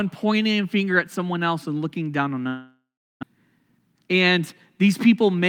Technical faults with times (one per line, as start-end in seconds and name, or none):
2.47-3.25 long network dropout
3.32-4.39 jitter buffer speed-up